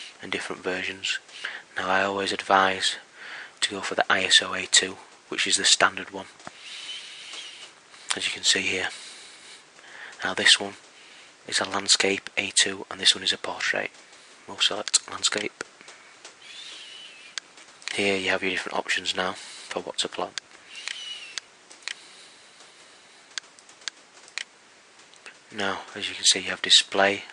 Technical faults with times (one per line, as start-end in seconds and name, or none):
none